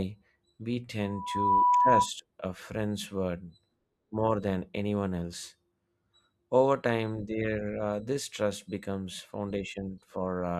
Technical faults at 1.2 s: loudspeaker feedback squeal

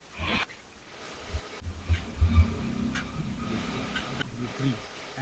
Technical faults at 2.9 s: speech suppressed in double talk

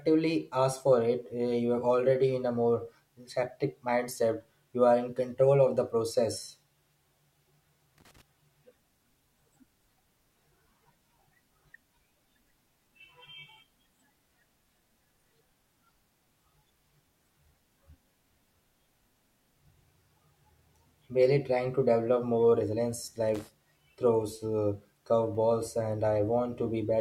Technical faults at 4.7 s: none

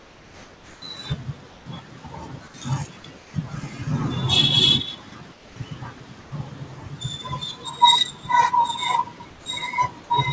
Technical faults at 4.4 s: none

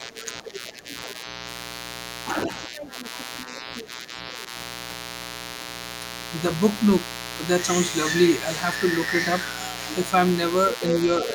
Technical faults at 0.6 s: mains buzz; speech suppressed in double talk; other side's voice leaking through

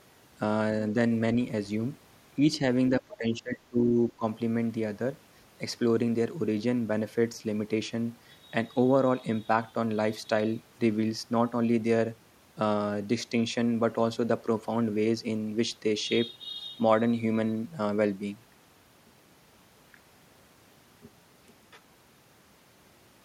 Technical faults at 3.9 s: speech suppressed in double talk

